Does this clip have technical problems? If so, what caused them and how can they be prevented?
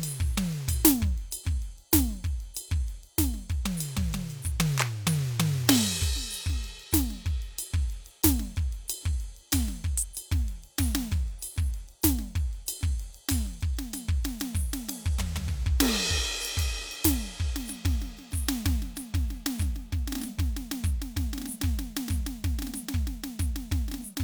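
No, nothing stood out as a technical problem on listening to this music, so there is no cause to trace or prevent.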